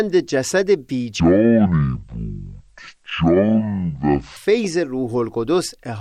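Speech, with a section at the wrong speed from 1.20 to 4.37 s: it plays at 0.512 times normal speed, dropping the pitch roughly ten semitones and dragging the timing, likely from a wrong playback clock. Unlike a pure pitch shift, tempo and pitch fall together.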